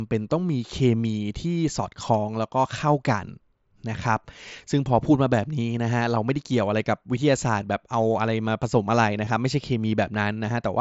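At 2.32 s and 9.25 s there's concealed Bluetooth headset packet loss: roughly 15 ms gaps, consistent with a couple of dropped packets, patched with recent waveform.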